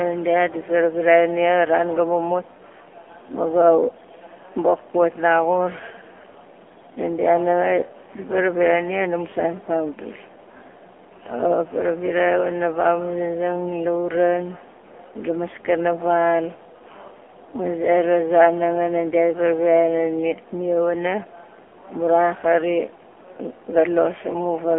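From start to finish the speech has been squeezed through an AMR narrowband mobile codec, the low-rate phone codec that rebuilds speech from a vocal-tract model and a few pulses per frame. Only a telephone band of roughly 300 Hz to 3.4 kHz is left, so the speech sounds thin and boxy, and the heavy coding adds a buzzy, synthetic edge. That degree of damage points to a low mode of around 7.4 kbps.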